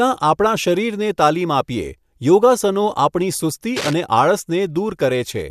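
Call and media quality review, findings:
Cable scratch noise, 3.76–3.93 s, right after "યોગાસનો આપણી સુસ્તી". Brief patch of dense, ragged scratchy rustle over the speech, roughly 10 dB under it. Likely a worn cable or connector on the mic side getting moved. Contact resistance jumps around as it shifts, so you get those uneven noise bursts for the couple hundred ms it's in motion. Worth reseating or swapping the lead.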